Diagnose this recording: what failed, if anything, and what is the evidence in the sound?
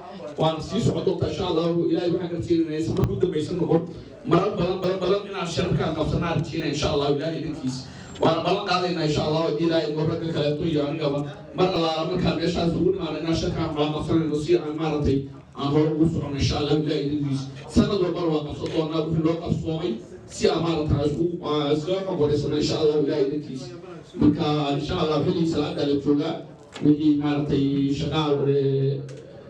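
Dropped buffers (overruns) at 3.04, 4.84, 6.6 and 11.76 s each give a jump in the sound, likely roughly 20 ms lost at the driver/buffer stage.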